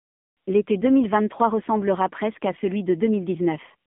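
Throughout, AMR narrowband mobile codec damage: speech is confined to roughly 150 Hz–3.5 kHz, nothing above 3.6 kHz, with buzzy, synthetic texture fitting a 7.4 kbps mode.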